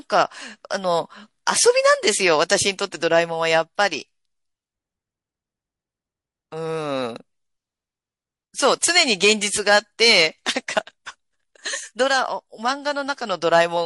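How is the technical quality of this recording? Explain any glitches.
The recording has plainly audible codec damage throughout, plus one pre-echo event.

MP3 compression, throughout: the speech sounds watery, likely from MP3 encoding at a low bitrate, around 48 kbps.

Pre-echo, 8.79–8.82 s: a hiss about 19 dB up precedes an attack by 25 ms, pointing to long transform blocks spreading quantisation noise backward.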